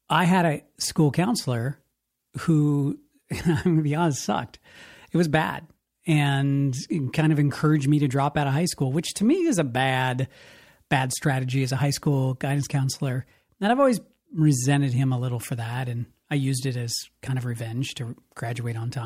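No technical faults are audible.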